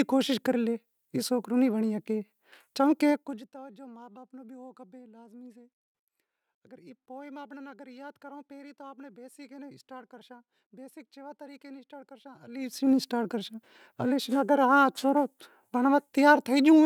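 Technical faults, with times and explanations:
3.09–3.52 s and 12.40–12.93 s, zipper noise: the gain was moved in unsmoothed 1 dB jumps, roughly 50 and then 40 times a second, dropping about 25 dB and later restoring it. Each jump clicks, so a fast ticking buzz rides on the speech during both level moves.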